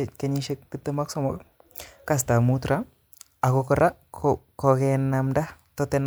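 Speech, with no technical faults.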